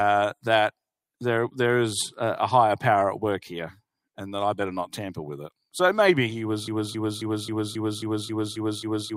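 At 6.68 s the playback chain most likely stalled, with the player, encoder or stream holding its last fragment and sending it again and again instead of fresh audio. The result is a broken-record loop: a 0.27-second slice repeats exactly, back to back, in a rapid stutter that runs without a break to the end of the clip. The audio that should have filled those final seconds is gone.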